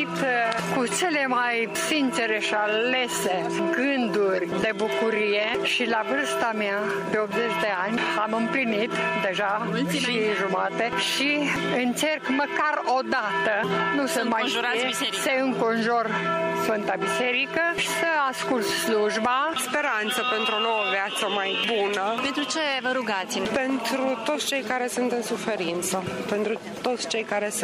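At 4.62 s there is an underrun with held sample. The output buffer ran dry, and the converter kept putting out its last value until new data arrived. The waveform sits flat for 2.9 ms, a length that fits a 128-sample gap. The sound stops with little or no click when the hold begins. Roughly 3 ms of live audio was lost during the hold, so the signal jumps back in at a new point.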